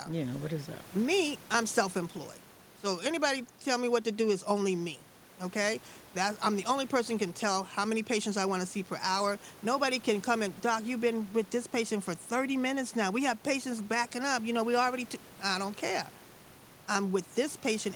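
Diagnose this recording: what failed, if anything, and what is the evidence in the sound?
Nothing failed at any stage: the speech carries no sign of a system fault, and the only other sound is the room's own background noise sitting about 25 dB under the speech, which belongs to the recording rather than the chain.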